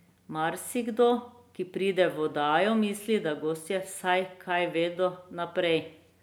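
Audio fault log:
No audible faults found.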